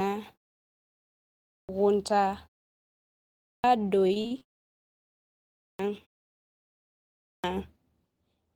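Clipped start after a pause at 1.28, 3.23, 5.39 and 7.07 s: after each roughly one-second silence, the output wakes late and swallows about 0.4 s. Speech bursts abruptly from flat silence, with no gradual onset visible on the waveform.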